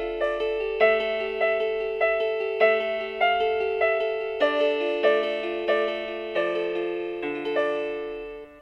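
No technical fault can be heard anywhere in the audio, and the signal stays steady and intact throughout.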